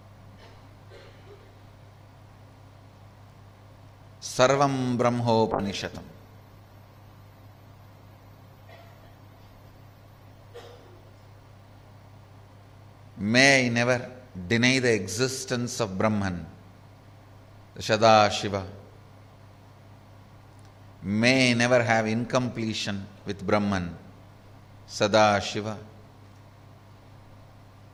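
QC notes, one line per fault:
5.52–13.09 s, call bitrate drop: the sound turns rough and watery, and the top end goes dull. It fits the encoder dropping from around 96 kbps to near 18 kbps, bottoming out for about 4.5 s before recovering.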